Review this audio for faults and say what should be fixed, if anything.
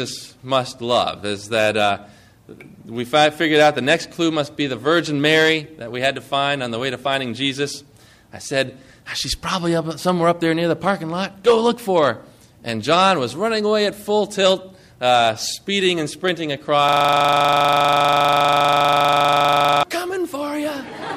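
A system hang loop runs from 16.89 s to 19.83 s. The same 40 ms slice of audio repeats exactly, some seventy times, because the host or driver stopped supplying new data while the audio hardware kept replaying its ring buffer. The result is a rigid, mechanical rattle at 25 Hz. What separates it from ordinary dropouts or glitchy stutter is that every repetition is identical and perfectly periodic, with no silence and no variation between cycles. To prevent it, the playback or recording driver should detect a stalled buffer and output silence rather than recycling stale data.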